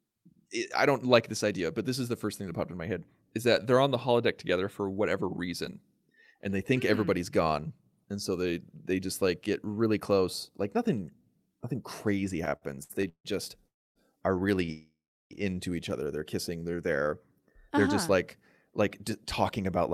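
A speech recording that has passed through a packet network shows jitter buffer problems through its second half. From 12.45 to 13.26 s there are repeated stalls (stutter). The buffer ran dry seven times, and the receiver stretched the last sound each time, adding 330 ms in all, about 41% of that span. The longest hold is 158 ms. On a spectrogram this appears as a series of smeared, horizontally extended bands where formants freeze in place. In the waveform, repeated near-identical cycles sit between normal stretches. A call audio freeze follows at 13.67 to 13.97 s, and a second one at 14.72 to 15.33 s just before "into each other". Each is a fading buzz from the last sound that decays into silence, about 280 ms of silence in the first and about 380 ms of a 586 ms fill in the second. The likely cause is packets held up in transit, after which playback resumes where it left off. On a spectrogram each freeze shows as a brief frozen spectral slice tapering into a blank column. 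In the waveform a decaying envelope drops to flat line. Between those two freezes, at 14.65 to 14.70 s right after "are really", a short stall from a late packet holds one sound 24 ms too long, heard as a slight buzzy sustain. It appears as a small stretch of repeated periods in the waveform and a short horizontal smear on the spectrogram. From 16.71 to 17.51 s a jitter buffer slow-down plays the speech at about 89% speed with unchanged pitch. The receiver repeated single pitch periods to add 102 ms of reserve, so syllables drag. Harmonics keep their spacing on a spectrogram while syllable durations lengthen, and the waveform contains duplicated periods. Finally, from 19.10 to 19.90 s, just after "just like like", a jitter buffer speed-up runs at about 107%. Short pitch-period pieces totalling around 70 ms were cut to shrink a backlog, making the ending sound hurried. Pitch holds steady on a spectrogram while syllables compress, and the waveform shows slightly shortened voiced segments with clean splices.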